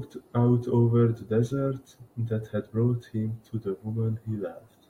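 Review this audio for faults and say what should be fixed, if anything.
Nothing here needs fixing, as no faults turn up anywhere in this speech recording.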